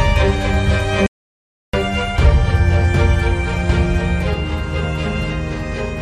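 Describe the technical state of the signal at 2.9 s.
At 2.9 s the signal is intact, with no audible dropout, distortion, glitch or other fault.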